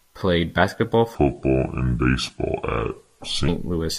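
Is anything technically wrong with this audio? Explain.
Yes, there is one fault. From 1.15 s to 3.48 s, right after "played basketball", a section at the wrong speed plays at 0.724 times normal, likely from resampling against a mismatched clock, so the speech drags and drops about five semitones. A spectrogram shows harmonics compressed downward and stretched in time; the waveform looks elongated.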